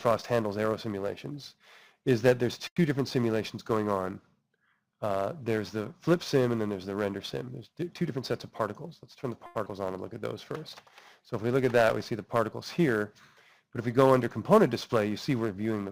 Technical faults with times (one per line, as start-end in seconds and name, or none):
2.67-2.78 short stall from a late packet
9.46-9.57 short stall from a late packet
9.65-9.68 skip ahead
13.63-13.99 jitter buffer speed-up